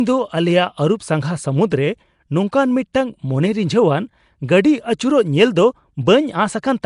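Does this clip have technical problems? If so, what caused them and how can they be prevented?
Yes. Throughout, the speech sounds rough, hissy and smeared, likely from Nellymoser compression. Noise-filled bands show as grainy, blocky texture on a spectrogram, with nothing above 10.6 kHz. Recording to an uncompressed or modern codec avoids this.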